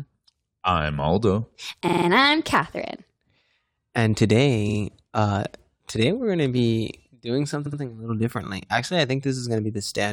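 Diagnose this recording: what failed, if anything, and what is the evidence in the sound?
The failure is at the codec or storage stage: repeated frames, where a short run of compressed frames got written or delivered more than once and the decoder simply played it again. In this speech you get three stutters. At 1.87–2.06 s a 46 ms chunk replays four extra times. At 4.68–4.77 s, right before "uh today we're going", a 46 ms chunk repeats twice. At 7.65–7.79 s, between "going to be doing" and "a little differently", a 70 ms chunk repeats twice. The 46 ms chunk size fits pairs of roughly 23 ms codec frames, and the recording ends up about 0.4 s longer overall.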